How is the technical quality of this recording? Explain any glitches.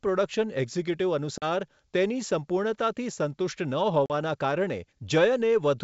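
The recording has two dropouts from packet loss on an ADPCM call, at 1.38–1.47 s and 4.06–4.12 s. Each time, 40 ms of audio vanishes, consistent with about two lost packets, and silence fills the gap. The decoder's adaptive predictor and step size then no longer match the sender's, so the speech returns slightly distorted before settling. On a waveform this shows as a flat, hard-edged gap; on a spectrogram, a blank vertical stripe across the full 7 kHz G.722 band.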